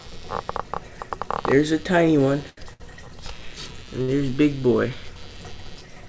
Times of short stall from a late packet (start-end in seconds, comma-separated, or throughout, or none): 2.49-2.82, 4.02-4.10